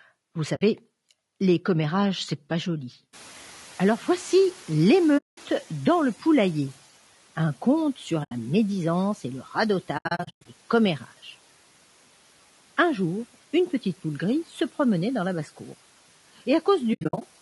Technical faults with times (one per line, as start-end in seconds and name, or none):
0.00-17.42 low-delay AAC compression
0.55-0.62 AAC frame loss with muting
3.13-6.74 noise suppressor catching up
5.17-5.38 AAC frame loss with muting
8.23-8.32 AAC frame loss with muting
9.97-10.46 AAC frame loss with muting
16.93-17.22 AAC frame loss with muting